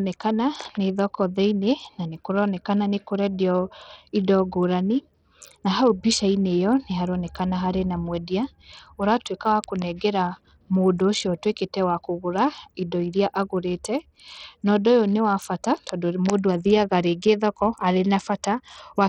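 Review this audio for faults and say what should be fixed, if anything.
Heavy Bluetooth SBC compression runs through the whole speech clip. The treble is thin and unstable, flickering in and out. A gritty, grainy noise sits on the sound, with some aliasing in the upper range. This points to a very small bit pool, which fits a low bitrate near 64 kbps. The top sub-bands get almost no bits, and the rest are coarsely quantised. SBC is the likely cause. To prevent it, record through a wired connection or a higher-quality Bluetooth codec.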